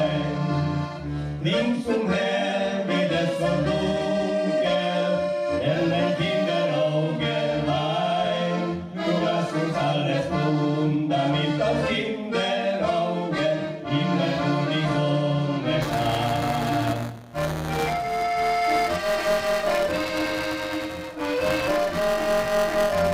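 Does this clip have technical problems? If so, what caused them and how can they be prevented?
Yes. Buffer tearing from 15.81 s to the end: writer and hardware pointers slipped, so roughly a tenth of each buffer replays audio about 10 ms old, causing a 200 Hz robotic buzz. Keep the write pointer a safe margin ahead of the read pointer and resynchronise them after any glitch.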